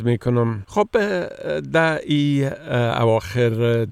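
No dropouts, distortion, noise bursts or timing errors can be heard anywhere in the recording.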